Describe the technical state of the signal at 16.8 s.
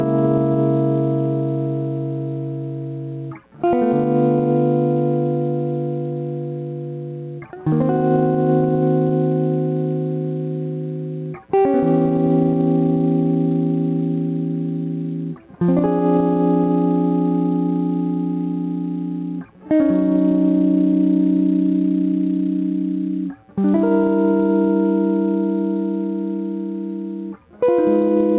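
At 16.8 s the music has gain pumping, as it does throughout: the level ducks by around 5 dB under each loud sound, likely from a fast limiter. Unlike a noise gate, it never cuts to silence. The band stops near 4 kHz from the call codec.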